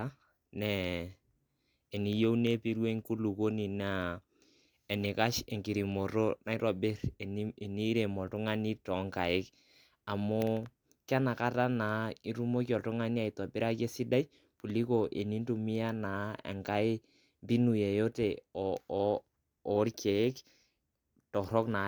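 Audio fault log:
No fault is heard anywhere in this speech clip.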